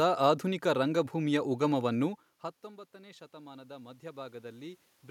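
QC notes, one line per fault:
2.96–4.86 s, automatic gain rising. The input dropped by about 22 dB after the talker moved back around 2 s. The gain control then lifted its gain about 7 dB over nearly two seconds. Voice and room noise swell together.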